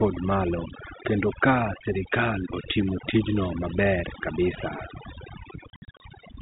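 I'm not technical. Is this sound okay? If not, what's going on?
No. The whole clip has overdone noise removal. A cleanup tool set too strong has stripped out the background noise, and it took quiet parts of the voice with it. The near-silent background has twinkling specks.

Near the end, from 5.7 to 6.0 seconds, there is packet loss filled with silence. Small pieces of the audio never arrived, and silence was played instead. You hear short holes, the longest about 60 ms, with hard edges. This fits lost packets of about 30 ms each.

The narrow telephone sound, with nothing above 4 kHz, is simply how phone lines carry audio.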